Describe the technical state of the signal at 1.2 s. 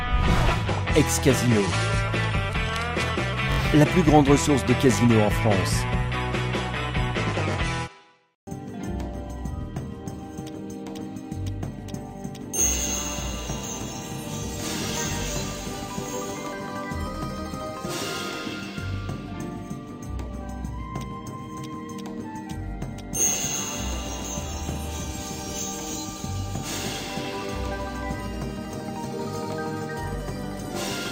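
At 1.2 s the signal is intact, with no dropout, clipping, distortion or other fault to be heard at that moment.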